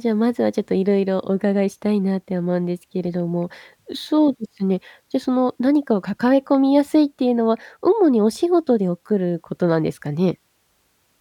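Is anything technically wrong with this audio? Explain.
No, nothing is technically wrong with this audio.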